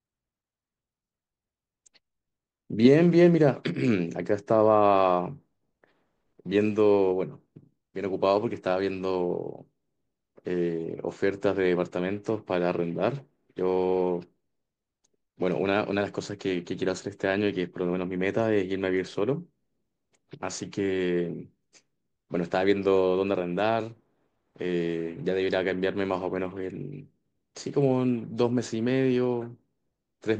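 Nothing in this speech recording stands out as a technical fault at any point, so there's no problem to report.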